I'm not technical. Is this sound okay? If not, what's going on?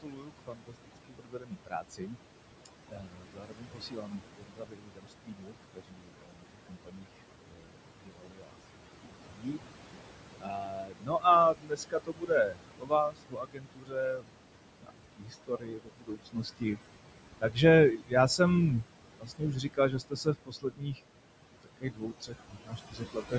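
No, not quite. There are noise suppressor artifacts all the way through. A cleanup filter keeps pushing the room noise down, so the background sinks between the words and rises under them.

There is also speech cut by the noise suppressor. The filter mistakes parts of the speech for noise and turns them down. From 0.01 to 16.79 seconds, soft sounds and word endings keep getting swallowed, about ten seconds' worth in total. It happens again, more briefly, from 17.41 to 21.0 seconds and from 21.63 to 23.34 seconds.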